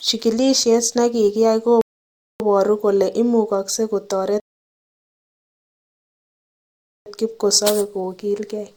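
At 1.81 s and again at 4.40 s the player's buffer runs dry, a rebuffering stall, so playback halts until more audio downloads. The speech drops to silence until 2.40 s and 7.06 s, adding about 0.59 s and 2.66 s, then resumes exactly where it stopped, with nothing missing.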